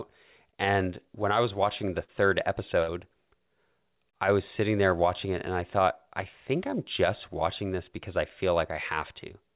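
Short concealed packet loss at 2.04 to 2.10 s, right after "I was watching the", interrupts this speech recording: about 40 ms of audio failed to reach the decoder in time, and the receiver bridged the hole by extending the preceding sound before blending back, leaving a brief smear in the phrase. A burst of packet loss follows at 2.82 to 2.90 s, where roughly 60 ms went missing in a row; the concealment stretched and faded the last sound across the gap, then speech resumed further on with that stretch gone, heard as a held, dying buzz or hiss. Throughout, nothing is present above 4 kHz, which fits a narrowband G.711-style call codec at 64 kbps.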